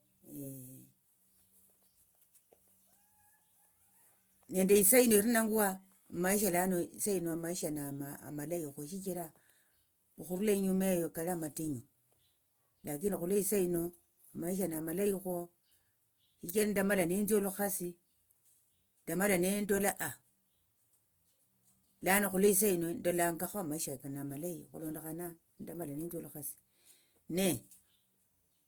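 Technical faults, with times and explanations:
Throughout: likely Opus compression in its CELT music mode. The speech sounds plainly grainy and rough because starved bands are filled with folded or noise content, which fits about 24 kbps. A spectrogram shows full bandwidth to 20.1 kHz, few holes, and smeared noisy texture.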